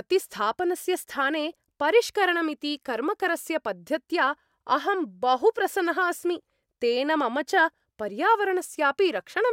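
A speech recording, and nothing is technically wrong with it.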